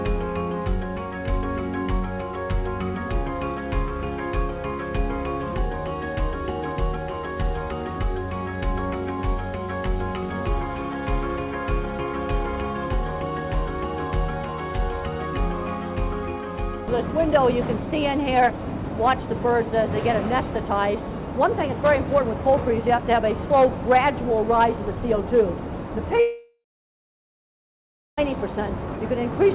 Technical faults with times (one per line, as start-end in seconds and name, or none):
26.20-28.19 long network dropout